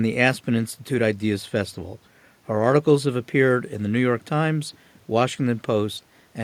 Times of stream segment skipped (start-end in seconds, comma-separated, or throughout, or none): none